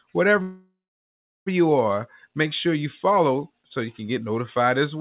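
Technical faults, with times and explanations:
0.42–1.48 s, call audio freeze: the sound stalls into a fading buzz, then about 0.73 s of silence, before resuming intact at "you are make sure". This likely comes from late packets emptying the jitter buffer. Unlike a dropout, nothing is lost; roughly 1 s of delay is inserted into the 4 kHz-limited call audio.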